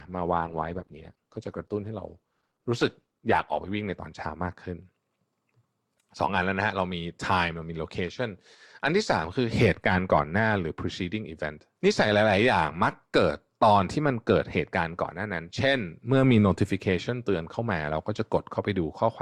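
For the first 4.0 s the speech sounds dull and smeared, with the treble gone or synthetic, then clears abruptly without any gap. This is an adaptive stream starting at a low bitrate, consistent with roughly 16 kbit/s Opus before stepping up to about 64 kbit/s.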